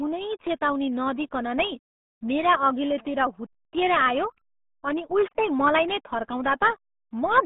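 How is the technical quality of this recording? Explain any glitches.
The technical quality is poor. A RealAudio 14.4 codec shapes the whole recording, start to finish. The band runs from about 150 Hz to 3.6 kHz, and nothing passes above 3.8 kHz. That points to a very low rate, which fits an 8 kbit/s dial-up speech codec. At that rate the coder keeps only a rough model of each sound. The damage is heavy. Speech sounds muffled, thin and gargly, with sibilants dulled and an underwater texture.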